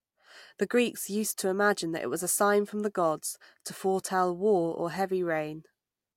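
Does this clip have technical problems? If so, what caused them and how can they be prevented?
No, nothing in this speech recording points to a technical fault, so there is no cause to trace and nothing to prevent.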